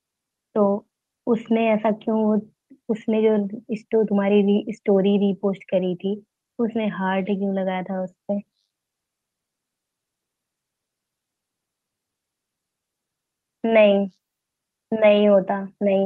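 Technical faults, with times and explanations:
No technical faults: the speech comes through an Opus call path working normally, with the top end rolled off above 12 kHz as that codec setting gives.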